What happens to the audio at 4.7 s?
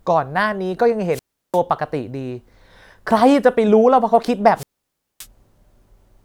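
A wireless microphone squelch dropout runs from 4.55 to 5.27 s, taking in 4.7 s. The analogue FM radio link weakens until the receiver's squelch shuts the output, so a short burst of hiss swells up, then the speech drops into a hole of near silence lasting about 0.57 s before the signal recovers and the receiver reopens. The speech then comes back.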